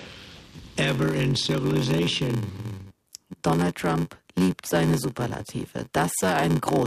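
A block size mismatch (padded) affects the clip from start to finish. Each block the earlier stage delivers is shorter than what the next stage reads, which fits a 512-sample read block, so every block ends in a short run of zeros. Those regular dropouts cause a steady buzz at 93.8 Hz, and the audio plays at 0.861 times its normal speed with its pitch roughly unchanged. On a waveform, flat silent gaps recur about every 10.7 ms. A spectrogram shows evenly spaced vertical stripes and a comb of harmonics at multiples of 93.8 Hz.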